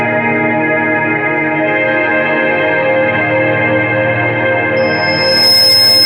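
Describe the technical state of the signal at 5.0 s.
At 5.0 s the signal is caught in loudspeaker feedback squeal, running from 4.76 s to 6.06 s. The microphone is re-amplifying its own loudspeaker, and the loop gain exceeds unity at 5.2 kHz. That tone swells over well under a second and ends up a few dB above the sound.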